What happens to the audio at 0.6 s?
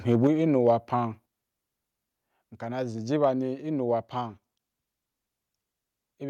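From 0.56 to 0.7 s the loudest speech peaks are flattened, a microphone overload. The input level was likely set too high, so peaks ran about 1 dB past the converter's ceiling and a small fraction of samples were clipped, adding a brief harsh crackle.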